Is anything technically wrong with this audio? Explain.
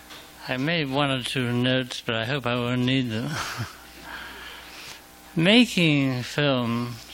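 No, nothing technically wrong can be heard here.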